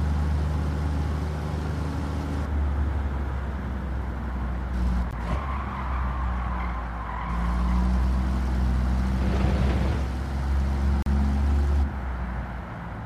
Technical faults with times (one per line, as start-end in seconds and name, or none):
5.11 Bluetooth stall
11.02-11.06 Bluetooth stall